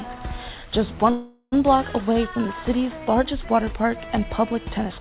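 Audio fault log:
1.1–1.54 s, call audio freeze: the last sound stretches into a fading buzz or hiss for about 420 ms, ending in roughly 50 ms of silence. Then the audio resumes where it stopped, with nothing lost but everything after it 420 ms later. The likely cause is delayed packets emptying the jitter buffer, on a call path with nothing above 4 kHz that fits G.711 mu-law.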